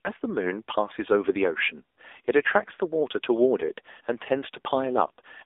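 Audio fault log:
Throughout: AMR narrowband mobile codec. The speech has been squeezed through the AMR-NB mobile codec at a low rate, which fits a mode around 7.4 kbps. The line band runs from 300 Hz to 3.6 kHz, so the low body of the voice and all brightness above that are gone. At this bit budget, each 20 ms frame is rebuilt from a vocal-tract model and a few pulses, which gives the speech a plainly audible buzzy, synthetic edge.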